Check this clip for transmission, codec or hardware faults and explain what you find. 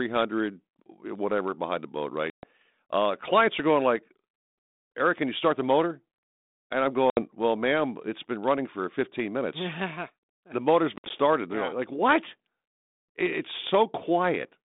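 The clip has three bursts of packet loss on an ADPCM call, carried over a band-limited G.726 line whose light coding texture is consistent with the 32 kbit/s rate. Each is a sudden hard-edged hole in the speech, after which the sound returns slightly distorted before settling within a few tens of milliseconds.

The first comes at 2.30 to 2.48 s, right after "behind the boat", with about 130 ms missing. The second is at 7.10 to 7.21 s, just before "well ma'am it's been", with about 70 ms gone. The third, at 10.96 to 11.11 s after "the motor's", is about 90 ms of loss scattered over 140 ms, the longest gap 60 ms.

The lost packets were filled with silence. Because ADPCM sends only differences from a prediction, the receiver's predictor and step size lost track of the sender's during each gap, which leaves the speech slightly distorted as it returns.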